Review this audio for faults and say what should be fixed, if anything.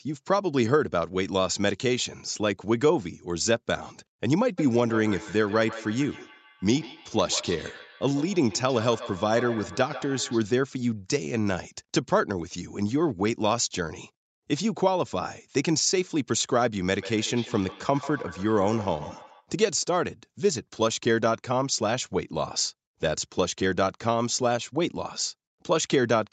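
From 4.58 to 10.57 s and again from 16.99 to 19.51 s there's feedback echo between two devices: the speech comes back roughly every 150 ms, peaking about 14 dB under the talker, as one device replays what the other's mic picked up. Mute or headphone one of the devices in that room.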